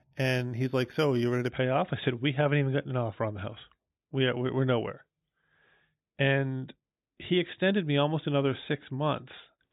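From the start to 1.5 s, there is imaging from linear upsampling. The rate appears to have been raised by straight-line interpolation, which fits an 8 kHz original taken up to 48 kHz. That crude filter softens the top of the speech band and leaves a mirrored copy of the spectrum between 4 kHz and 8 kHz, around 25 dB below the signal. It sounds like a faint metallic shimmer sitting above the dulled speech.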